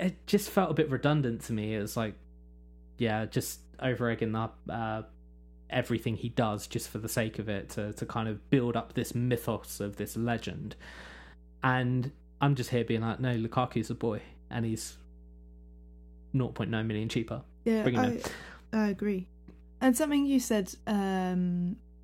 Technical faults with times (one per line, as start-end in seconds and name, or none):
0.00-22.03 mains hum